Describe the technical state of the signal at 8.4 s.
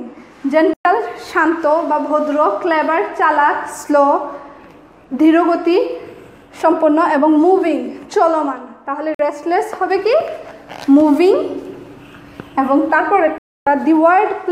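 At 8.4 s the signal is intact, with no dropout, clipping, distortion or other fault audible at that point.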